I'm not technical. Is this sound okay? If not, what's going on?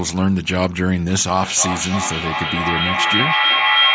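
No. From about 1.4 s to the end, the speech comes back as a repeating echo roughly every third of a second, growing thinner and ringing, and building up louder than the speaker instead of fading. This is feedback echo between two devices: two devices in one room join the same call, and each microphone picks up the other's speaker.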